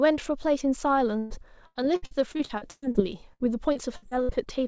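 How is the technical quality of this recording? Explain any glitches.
The speech is marred by two bursts of repeated packet loss, heard as robotic sound. The call path's wideband codec leaves nothing above 8 kHz, which fits G.722.

From 1.19 to 2.97 s, the sound breaks up again and again. Packets were lost or arrived too late. Each hole was patched by stretching the last bit of sound forward. About a third of this stretch is patched. The longest hole lasts 119 ms. The result is choppy, with pieces missing. From 3.33 to 4.61 s it returns, milder. Gaps reach 64 ms and cover about a fifth of that span.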